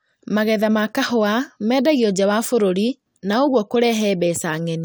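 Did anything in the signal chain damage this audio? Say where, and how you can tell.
No, nothing along the chain seems to have damaged this speech, and there's nothing to point at anywhere in the recording.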